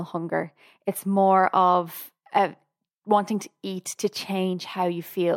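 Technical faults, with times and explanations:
Nothing technical stands out in this speech recording; there's nothing to flag at any point.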